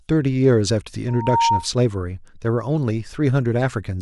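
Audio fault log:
1.08–1.68 s: loudspeaker feedback squeal. A single 929 Hz tone swells out of the speech over roughly a third of a second and settles a little above the speech level, about 5 dB, as the microphone re-amplifies its own loudspeaker output at that frequency.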